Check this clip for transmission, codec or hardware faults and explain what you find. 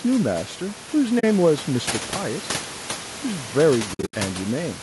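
Two kinds of fault are present in the speech: codec damage throughout and two muted dropouts, with room noise sitting about 16 dB below the speech as part of the recording.

Low-delay AAC compression, across the whole clip: the coarse, grainy texture is likely from AAC-ELD, the low-delay codec used for video calls. Its short frames, around 20 ms, code about 500 frequency lines each with a low-delay window, so at a rate that fits about 32 kbps the voice is plainly rough, with noise filling the gaps between harmonics and a thin, somewhat artificial top band.

AAC frame loss with muting, at 1.19 to 1.24 s: a 40 ms gap, consistent with two lost frames. The decoder replaced the missing spectrum with silence, and because successive frames overlap, the audio fades down and back up rather than cutting off. The result is a brief, soft-edged hole in the speech.

AAC frame loss with muting, at 3.93 to 4.14 s: a worse patch where about 160 ms of audio is lost in several pieces over roughly 200 ms. 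The longest single run is around 70 ms. Each lost stretch was zeroed and faded through the overlapping windows. The speech therefore flickers in and out over that span as a string of soft dropouts.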